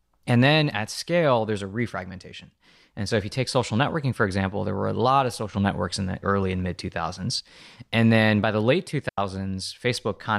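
At 9.09 s, just after "then by the late", a digital wireless dropout mutes the speech for about 87 ms, ending at 9.18 s. The receiver lost too much data and faded to silence, leaving a clean gap with no noise burst on either side, a flat waveform and an empty spectrogram column.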